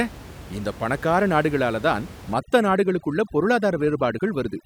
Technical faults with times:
2.34-4.66 overdone noise removal

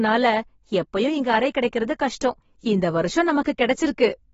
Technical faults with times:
0.00-4.33 AAC compression

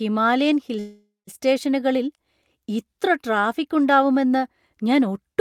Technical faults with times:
0.79-1.29 call audio freeze

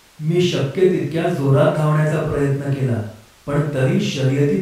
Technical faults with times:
none

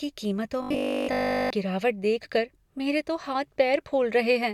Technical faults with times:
0.62-1.50 robotic sound from repeated short buffers

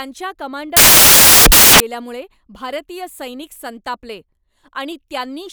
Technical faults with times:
0.77-1.80 samples built from the wrong bytes

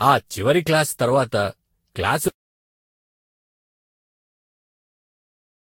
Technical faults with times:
0.00-5.64 generation loss
2.28-5.64 audio dropout to silence

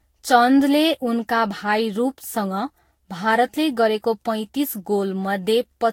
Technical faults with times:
0.00-5.92 generation loss

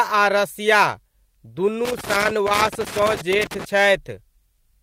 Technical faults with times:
1.85-3.65 loose connector crackle

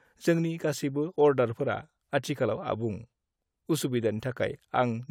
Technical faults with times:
none

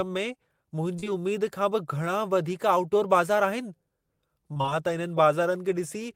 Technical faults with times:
0.95-1.08 short concealed packet loss
4.54-4.73 repeated packet loss (robotic sound)

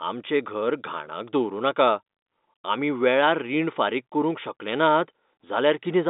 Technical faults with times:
none

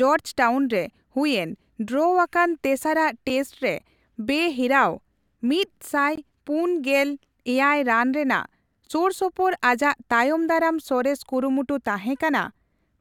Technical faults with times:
3.29 block of digital silence
6.16 block of digital silence

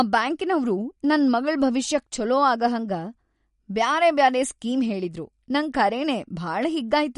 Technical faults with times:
0.00-7.18 MP3 compression

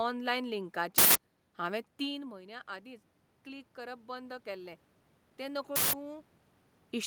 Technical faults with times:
0.98-1.15 uninitialised buffer
2.09-4.84 automatic gain rising
5.76-5.93 uninitialised buffer

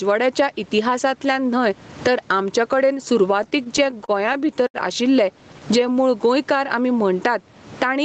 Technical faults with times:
0.00-8.05 gain pumping
3.43-4.77 repeated stalls (stutter)
5.31-5.94 jitter buffer slow-down

